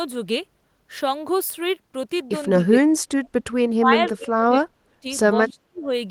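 The speech drops out three times, from 2.55 to 3.29 s, 3.77 to 5.06 s and 5.35 to 5.92 s, falling by roughly 35 to 40 dB. This is speech suppressed in double talk, likely an echo canceller mistaking the local talker for loudspeaker echo and attenuating both.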